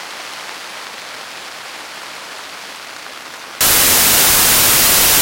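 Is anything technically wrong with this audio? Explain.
Yes. From 3.61 s to the end at 5.22 s, there is a wrong sample width fault. The data are read with a different number of bytes per sample than they were written with. The sound points to 32-bit samples read as packed 24-bit ones. Most values mix bytes from neighbouring samples, so loud noise swamps the sound, which stays buried underneath. Each read sample is shorter, so the sound runs at 0.75 times speed and lower in pitch.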